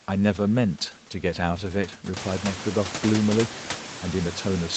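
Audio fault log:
Nothing stood out on listening to this speech recording.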